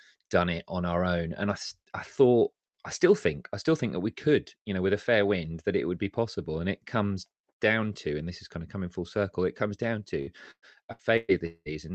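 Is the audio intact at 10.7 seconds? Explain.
No. Repeated packet loss (robotic sound) runs from 10.21 to 11.68 s, starting right after "circle it comes down", so 10.7 s falls inside it. Data went missing five times in quick succession, the longest hole about 190 ms, and each time the receiver filled the hole by extending the last bit of sound. About 540 ms was patched this way, roughly a third of the stretch, giving choppy, robotic-sounding audio with pieces missing.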